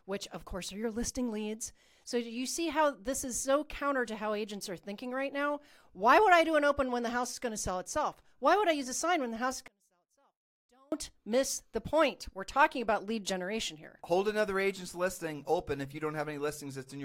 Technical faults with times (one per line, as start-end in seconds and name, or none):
9.68-10.92 one channel inverted